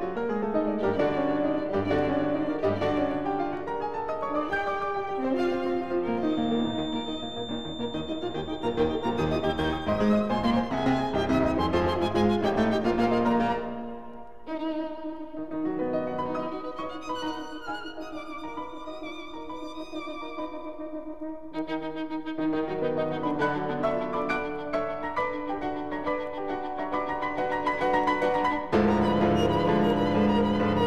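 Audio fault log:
6.17–9.99 s feedback whistle: the loudspeaker-to-microphone loop is likely held right at the edge of feedback, so a single 3.6 kHz tone keeps ringing without building up. It sits as a thin, steady whistle about 15 dB under the sound, swelling and fading slowly in level.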